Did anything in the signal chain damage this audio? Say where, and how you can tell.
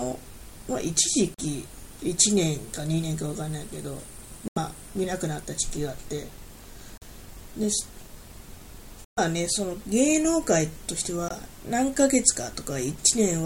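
Yes, at playback: five short holes at 1.34, 4.48, 6.98, 9.04 and 11.28 s, about 21 to 128 ms long, cut cleanly, with the sound resuming as if it had kept running. That's likely a Bluetooth dropout: late packets discarded, leaving silence.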